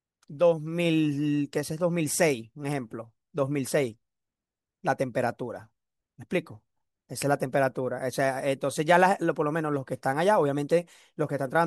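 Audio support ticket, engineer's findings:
No faults found on listening; audio path unremarkable.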